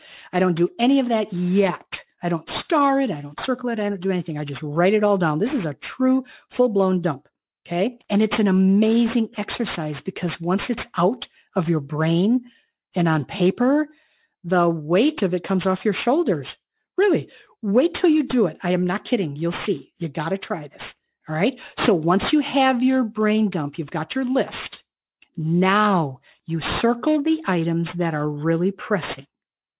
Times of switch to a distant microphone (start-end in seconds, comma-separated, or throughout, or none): none